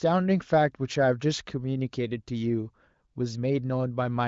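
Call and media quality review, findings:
No faults found in this speech clip.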